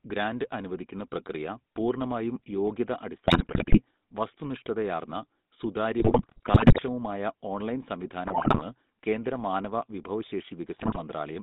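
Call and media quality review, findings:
GSM full-rate codec, whole clip: buzzy, gravelly speech band-limited to 150 Hz to 3.7 kHz, consistent with a 13 kbps full-rate codec. The pulse-excited vocal-tract model gives steady roughness, not intermittent dropouts.

GSM bit errors at 3.24–3.8 s, 5.98–6.8 s, 8.26–8.62 s and 10.78–10.99 s: squawks, pops and gargling bursts. Corrupted filter, pitch or gain parameters distort frame after frame while each burst lasts. Unlike packet loss, the audio garbles rather than going silent.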